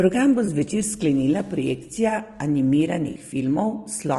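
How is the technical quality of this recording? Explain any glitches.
Technical quality is compromised by audible coding damage across the whole clip and two brief dropouts.

Throughout, the speech sounds rough and grainy, with noise filling the gaps between pitch harmonics and a thin, synthetic-sounding top band. This points to low-delay AAC compression, likely AAC-ELD at a low rate that fits around 32 kbps. Its short frames resolve harmonics poorly and leave few bits for each frame.

At 0.45 to 0.49 s, just before "zvečer sklenila projekcija", and again at 3.11 to 3.17 s, there is AAC frame loss with concealment. The decoder rebuilt the missing frames from the last good spectrum, producing short smeared, noisy patches of about 20 ms and 40 ms.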